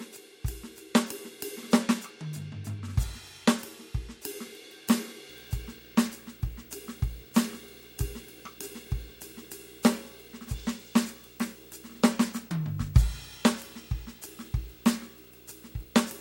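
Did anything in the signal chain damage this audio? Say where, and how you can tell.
Yes. From 5.30 s to the end, a video or display buzz rides under the music at roughly 25 dB down: a 59.94 Hz field-rate buzz with hash plus a 15.7 kHz line-rate whine. That points to analogue wiring near a display, not mains hum, which would sit at exactly 50 or 60 Hz without the whine.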